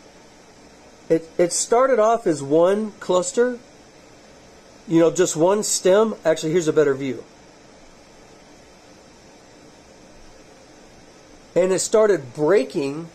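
Channel delay (comb filtering), 6.89–7.91 s: a lag of roughly one sample between channels makes the mono sum cancel near 20 kHz, dulling the top.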